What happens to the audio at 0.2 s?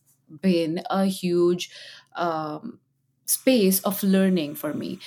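Nothing goes wrong at 0.2 s; the audio is intact there, with no dropout, click or other fault at that moment.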